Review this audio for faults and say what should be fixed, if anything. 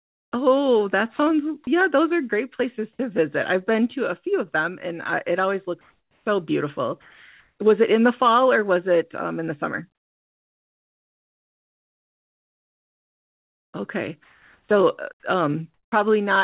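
Comfort noise in place of the background shows up at 0.00–0.32 s, 5.81–6.26 s, 7.01–7.58 s, 14.24–14.69 s and 15.74–15.92 s. In each gap the real room tone turns into a flat, featureless hiss. At the start it drops about 22 dB, and at 5.81 s it rises about 4 dB. That's likely discontinuous transmission: the sender goes quiet in pauses and the receiver synthesises noise to fill them. Turning off DTX, or improving the comfort-noise level matching, would fix it.

Sound dropped by the voice detector happens twice, as brief bits of sound replaced by steady noise at 1.16–1.19 s and 1.64–1.67 s, roughly 30 ms each. The detector likely mistook the sound for background and stopped sending until it triggered again. Lowering the VAD threshold or adding hangover time would keep those bits from being dropped.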